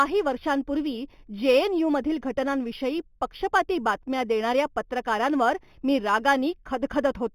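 Imaging from linear upsampling runs throughout: rate conversion by straight-line interpolation, fitting 8 kHz to 44.1 kHz, left faint mirrored images between 4 and 8 kHz, adding metallic shimmer to sibilants.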